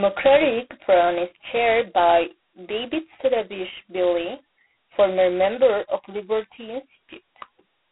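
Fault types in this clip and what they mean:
G.726 ADPCM: telephone-band speech, 300 Hz to 3.4 kHz with nothing above 3.9 kHz, carrying a heavy, rasping hiss that rises and falls with the voice throughout. This hiss pointing to the 16 kbit/s rate sets it apart from a steady noise floor or a clean band-limit.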